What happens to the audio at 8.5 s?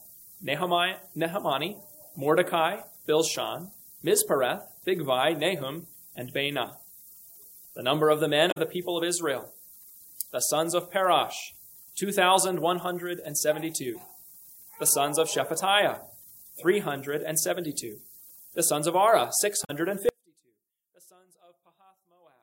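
Damaged data in a compressed stream occurs from 8.50 to 8.57 s. Corrupted bytes in that stretch cause the decoder to misread its frames and lose sync while it searches for the next valid frame header. The result is a brief chirp or blip lasting about 70 ms.

Low bit depth with noise shaping is also present at that moment, as it is throughout the clip. The audio carries only 8 bits, and the rounding error is fed back and pushed upward in frequency. This produces a steady, thin hiss, roughly 20 dB below the signal, that grows stronger toward the top of the band.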